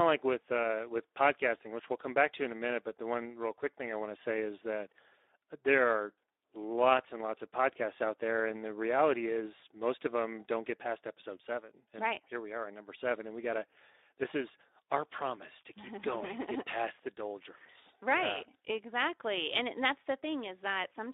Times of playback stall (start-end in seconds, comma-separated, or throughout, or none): none